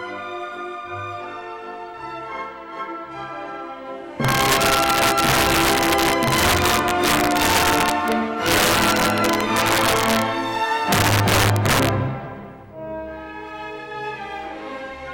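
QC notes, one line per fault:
4.25–10.22 s: integer overflow. Loud peaks push about 5 dB past the integer limit. They wrap to the opposite sign instead of clipping. Each one is a violent crack.
10.92–11.89 s: integer overflow again. The same roughly 5 dB overdrive flips loud peaks across the full range. The cracks are much harsher than clipping.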